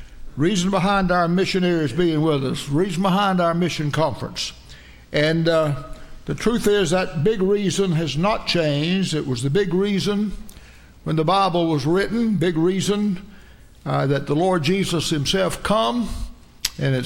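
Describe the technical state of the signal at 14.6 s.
At 14.6 s the signal plays through cleanly, with no dropout, clipping, glitch or other fault to be heard at that point.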